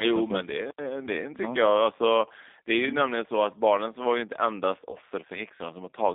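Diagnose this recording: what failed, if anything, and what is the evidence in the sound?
The speech is rough and slightly synthetic throughout, squeezed into a band from about 250 Hz to 3.7 kHz. That points to the codec stage: a G.729 codec at a bitrate that fits 8 kbit/s, rebuilding each frame from a vocal-tract filter, pitch predictor and a few pulses.

Just after "ju inte endast", from 4.91 to 4.98 s, the sound smears into a brief buzzy tone or coloured noise that fades. This is VoIP packet loss concealed by the speech codec: about 20 ms went missing, fitting two lost 10 ms frames. The decoder extrapolated from its last pitch and filter at falling gain, and the voice stayed weak or distorted after packets resumed.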